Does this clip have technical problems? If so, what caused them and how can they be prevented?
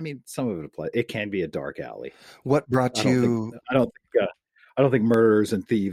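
Yes. From 0.34 s to 5.74 s the speech carries a regular click about every 0.6 s, roughly ten in all, the pattern of clock drift buffer slips. The likely cause is two devices running on independent clocks that disagree by a few hundred ppm, so the buffer between them drifts until a handful of samples is dropped or repeated. Prevent it by locking both devices to one word clock or adding asynchronous sample-rate conversion.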